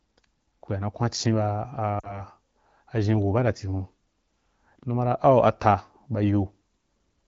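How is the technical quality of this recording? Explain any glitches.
One glitch stands out in this AMR wideband (HD Voice) speech. At 2.00 to 2.22 s there are lost AMR speech frames. About 40 ms went missing, which fits two frames. The decoder repeated the last good settings at falling gain, so the sound briefly drops to near silence, and the voice comes back weak or rough for a moment.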